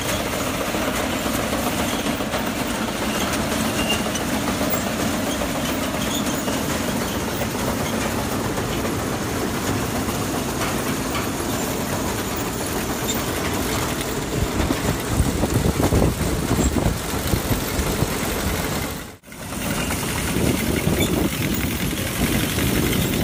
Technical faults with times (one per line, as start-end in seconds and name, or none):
none